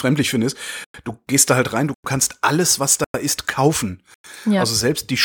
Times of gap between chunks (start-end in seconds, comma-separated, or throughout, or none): 0.84-0.94, 1.94-2.04, 3.04-3.14, 4.14-4.24